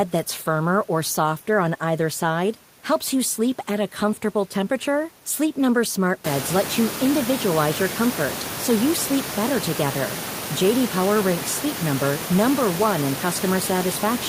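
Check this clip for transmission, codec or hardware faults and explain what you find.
No transmission, codec or hardware faults.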